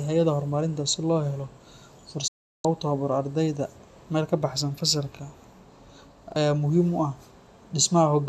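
At 2.27 s the speech snaps to silence through a very fast fade of about 8 ms and stays muted until 2.65 s, when it resumes mid-flow. This is a digital broadcast dropout: the receiver stopped getting usable frames, either through lost signal or failed checksums, and muted rather than play corrupt data. The roughly 360 ms of programme sent during that gap is gone, not delayed.

At 6.32 s, just before "aya muhiim u", there is a quick stutter lasting until 6.36 s, where a 40 ms slice of speech plays a second time with a hard join. This is a repeated buffer: fresh audio did not reach the output in time, so the device replayed its last 40 ms block once. About 40 ms of new audio was skipped as a result.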